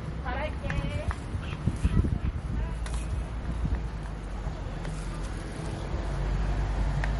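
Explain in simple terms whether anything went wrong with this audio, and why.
Throughout the audio, the sound turns watery and swirly, with metallic chirps and blurred attacks. This is likely MP3 compression, squeezed too hard and discarding detail.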